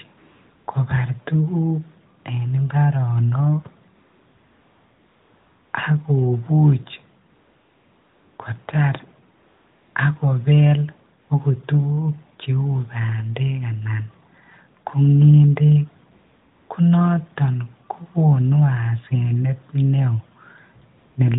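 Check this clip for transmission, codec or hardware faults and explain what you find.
AMR comfort noise appears eight times in this speech, at 0.18–0.68 s, 2.20–2.24 s, 3.96–5.74 s, 7.30–8.38 s, 9.38–9.96 s just before "ak kobel akot tukuk", 11.22–11.30 s between "ak kobel" and "akot tukuk", 16.12–16.70 s just before "ko noton kokonu", and 20.98–21.16 s. In each gap the sender judged the line silent and stopped transmitting speech frames, for 40 ms up to 1.78 s, and the receiver filled it with synthetic noise built from a rough level-and-spectrum sketch. The real background therefore drops out and a smooth, steady hiss switches in and out. The narrowband AMR coding underneath, light and consistent with a 12.2 kbps mode, caps the sound at 4 kHz.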